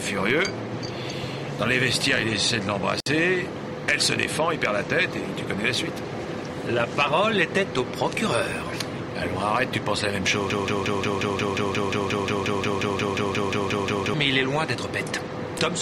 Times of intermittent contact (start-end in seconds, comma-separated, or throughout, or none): 2.99-3.06